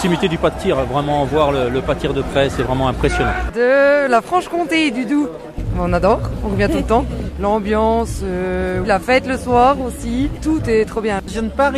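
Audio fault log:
Nothing to log here: I listened all the way along and didn't hear anything going wrong with this audio.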